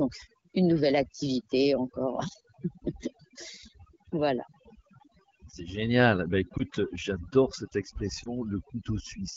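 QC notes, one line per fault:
Throughout: overdone noise removal. The background drops and breaks up into twinkling specks. The reduction was set too hard, so frequency bands close to the noise estimate were cut away, taking quieter parts of the voice with them.
6.57 to 6.62 s and 8.23 to 8.29 s: lost AMR speech frames. Each is a brief dip or warble in the speech, which fits a single lost 20 ms frame. The decoder repeated its last good pitch and vocal tract settings at lower gain, then recovered through the clear AMR wideband path.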